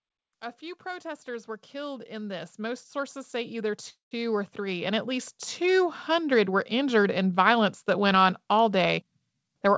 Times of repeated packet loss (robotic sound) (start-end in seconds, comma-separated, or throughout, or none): none